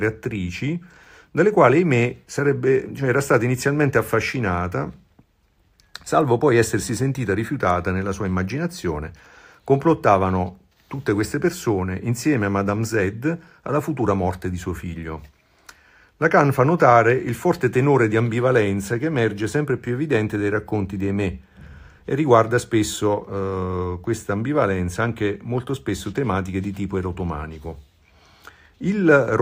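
No technical faults detected.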